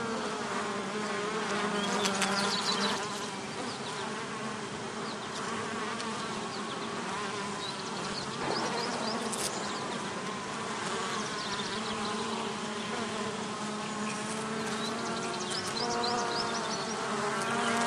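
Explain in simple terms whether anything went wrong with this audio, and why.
Weak digital radio reception let bit errors slip past the error correction into the compressed audio. This is DAB burbling: single frequency bands get short blips of noise at 1.92–2.52, 6.28–6.38, 8.08–8.56, 11.37–12.03 and 15.71–16.51 seconds. The last three have more errors.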